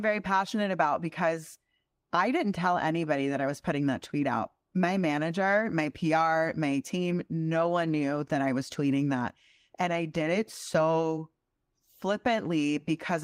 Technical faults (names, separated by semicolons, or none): none